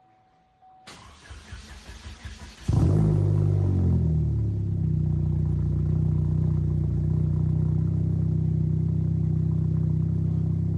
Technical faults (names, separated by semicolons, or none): none